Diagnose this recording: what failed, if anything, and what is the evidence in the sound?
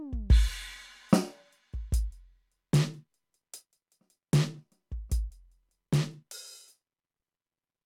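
Nothing failed; the music carries no audible fault.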